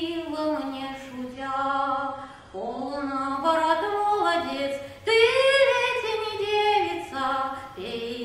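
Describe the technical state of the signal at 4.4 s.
The signal is intact at 4.4 s, with no dropout, distortion, glitch or other fault audible at that point.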